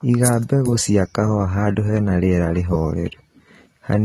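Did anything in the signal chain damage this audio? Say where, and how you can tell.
Yes. AAC compression damages the speech throughout, likely at the codec stage: the sound is dull and smeared, with a warbling, fizzy texture on sibilants and held sounds. The coder has dropped high bands and quantised the rest coarsely, which fits a low bitrate around 32 kbps.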